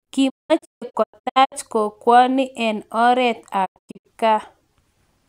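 A speech clip where the sound is punched full of short silent holes with quick fades, from 0.28 to 1.54 s, just before "kokwoni en oreet", and from 3.64 to 4.07 s, just after it. This is a digital broadcast dropout: the receiver muted whenever frames were lost or failed checks, losing about 0.7 s and 0.3 s of audio.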